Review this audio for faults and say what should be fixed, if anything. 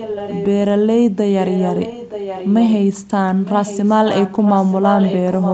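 There's an echo leak you'll want to sort out: a delayed copy of the speech runs underneath from 0.00 to 0.47 s, again from 1.41 to 2.74 s, and from 3.41 s to the end. It trails the original by 925 ms and sits roughly 10 dB below it. That's likely one side's loudspeaker bleeding into its mic, with the echo canceller letting part of it back down the line. Getting that end onto a headset, or letting its canceller properly adapt to that long delay, should stop it.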